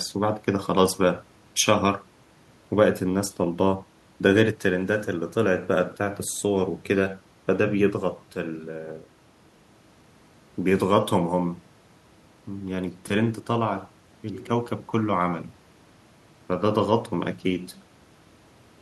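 Nothing technical stands out in this speech recording; it runs along without any fault worth pointing to.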